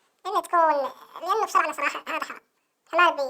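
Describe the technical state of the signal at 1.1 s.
At 1.1 s the speech is affected by audio read two samples at a time (double speed), a fault that runs through the entire clip rather than starting there. The reader treats each pair of samples as a single frame, as though the stream held two channels or samples twice as wide, so playback moves at twice the speed, 12 semitones (an octave) higher.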